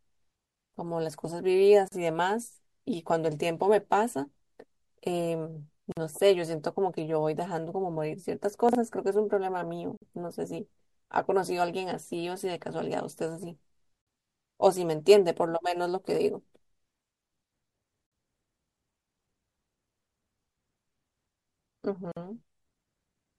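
At 1.88 s a short silence of about 38 ms cuts into the speech, followed by 49 ms silences at 5.92, 9.97, 14.02, 18.07 and 22.12 s. These are gaps at joins of encoded pieces, recurring every 4 s. Each separately encoded piece keeps its encoder start delay and padded final frame, so the speech drops out abruptly, slightly smeared, then resumes where it stopped.

Between 8.69 and 8.75 s there are chunks out of order. A 20 ms chunk plays two chunks late, after audio that should follow it. Nothing is lost, but the sequence is scrambled, so this brief stretch of speech sounds jumbled, with three hard joins.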